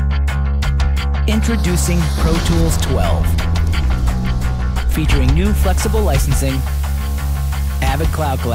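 The audio is clean until 5.56 s. From there to the end at 8.55 s, a constant, even hiss sits under the sound, roughly 20 dB below it. This is low bit depth with dither. The signal has been rounded to very few levels, and the hiss level fits a resolution of about 6 bits. Random dither was added before the rounding. That turns the rounding error into steady white noise instead of distortion. So the sound stays clean in shape, just with hiss under it.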